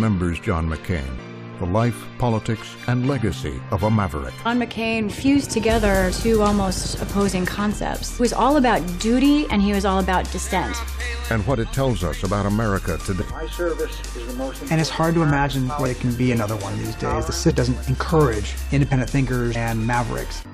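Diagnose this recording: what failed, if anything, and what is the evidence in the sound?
The decoder stage lost whole frames, which were either missing from the file or rejected as damaged. Compressed frames skipped at 1.17, 4.45, 8.19, 15.85, 17.50–17.52 and 19.54 s. Each time the sound jumps ahead by roughly 150–400 ms, a multiple of the 23.2 ms frame.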